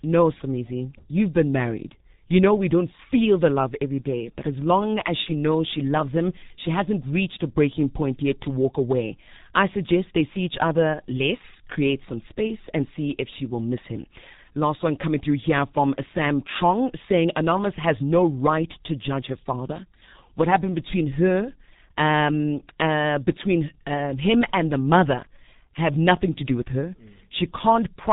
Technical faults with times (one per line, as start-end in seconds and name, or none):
0.00-28.12 G.723.1 codec